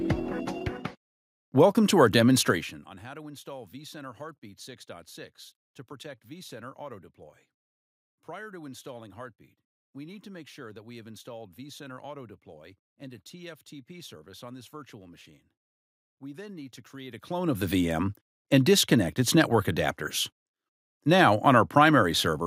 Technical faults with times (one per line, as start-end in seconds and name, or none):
none